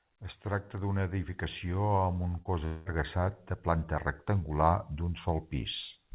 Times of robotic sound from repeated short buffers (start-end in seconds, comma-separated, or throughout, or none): none